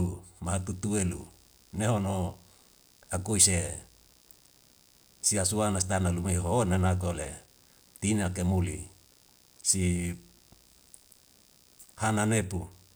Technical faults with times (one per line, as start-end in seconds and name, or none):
0.00-12.96 computer activity noise